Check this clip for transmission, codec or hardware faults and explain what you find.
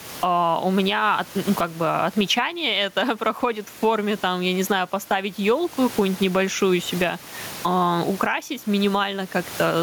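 One fault runs through the whole recording: gain pumping, with the room noise about 31 dB below the speech.

Throughout, the gain swings by around 20 dB, bringing loud and soft parts closer in level, likely because excessive microphone gain is driving a fast limiter. The waveform looks flattened, with squashed peaks.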